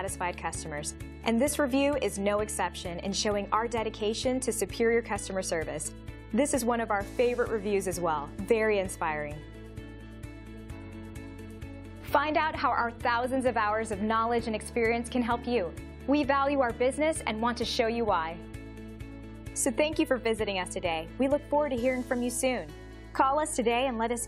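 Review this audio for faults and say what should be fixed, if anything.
No faults detected; nothing needs fixing.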